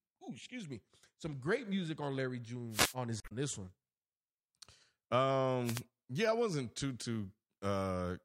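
At 2.70 to 2.95 s, a wireless microphone noise hit cuts across the speech. The radio signal fades as reflections cancel it. Receiver hiss swells into a brief swish of static. A second hit, from 5.64 to 5.82 s, comes just before "yeah I wasn't too".

From 3.20 to 3.32 s, just before "this one", damaged data in the compressed stream gives a short glitch. Corrupted bytes confuse the decoder. It loses frame sync and hunts for the next valid header.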